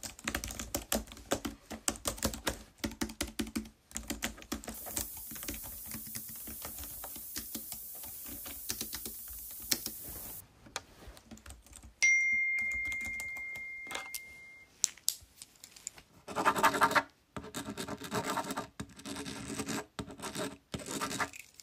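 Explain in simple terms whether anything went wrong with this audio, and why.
From 4.74 to 10.40 s there's low bit depth with noise shaping: a steady, thin hiss, almost as loud as the sound itself, that gets much brighter toward the top end. It fits an 8-bit signal whose rounding error has been pushed up into the high frequencies.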